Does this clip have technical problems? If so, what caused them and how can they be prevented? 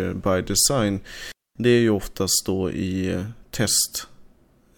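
Yes. The speech cuts out completely from 1.32 to 1.56 s, a gap of about 0.24 s. This is a digital wireless dropout: the receiver stopped getting enough usable data from the transmitter and muted its output, fading down and back up very quickly. It differs from an analogue wireless dropout because the hole is clean near-silence, with no hiss, crackle or noise burst on either side of it. To prevent it, keep a clear line of sight between transmitter and receiver, shorten the distance, move away from interference sources, and use diversity antennas.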